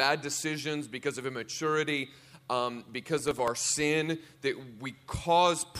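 From 3.17 to 3.48 s, processor overload crackle: several very short buffers missed their deadlines, each replaying stale audio, producing a gritty, tearing crackle over the sound.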